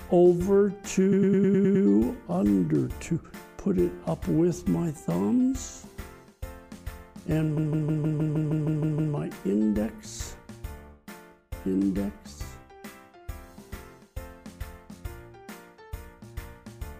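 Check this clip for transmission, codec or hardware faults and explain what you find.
Two stretches of repeated frames make the audio stutter. At 1.11 to 1.84 s, a block of about 104.5 ms (likely four compressed frames) plays seven extra times, adding 0.73 s. At 7.57 to 9.13 s, a 156.7 ms block (likely six frames) repeats ten extra times, adding 1.57 s. Unlike a dropout, nothing goes missing; the same fragment simply loops and the clip grows longer.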